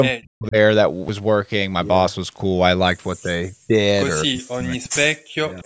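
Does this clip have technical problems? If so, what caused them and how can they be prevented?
Yes. An echo canceller that likely could not separate this talker from simultaneous far-end sound, an overlap known as double talk, turned the speech down from 0.07 to 0.56 s, 3.23 to 3.73 s, 4.24 to 5.11 s and 5.47 to 5.65 s, with dips as deep as about 40 dB. Better double-talk detection, or headsets that keep loudspeaker sound out of the microphone, would prevent this.

A dropped buffer (overrun), likely from the capture program falling behind the hardware, cuts out roughly 15 ms at 1.09 s, producing a small skip. Larger capture buffers or higher scheduling priority for the audio thread would prevent this.

An echo leak, likely from a loudspeaker echo the canceller did not fully remove, leaves a very faint copy about 244 ms late, far below the speech, between 5.57 and 5.62 s. Lower loudspeaker volume, a headset, or better echo-canceller adaptation would prevent this.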